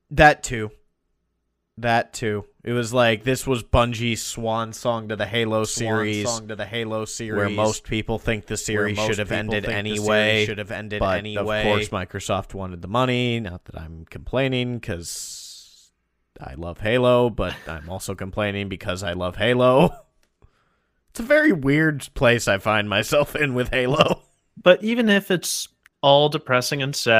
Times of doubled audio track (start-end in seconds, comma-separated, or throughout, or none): 5.64-11.90